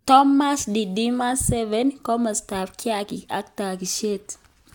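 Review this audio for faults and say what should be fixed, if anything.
No faults; nothing needs fixing.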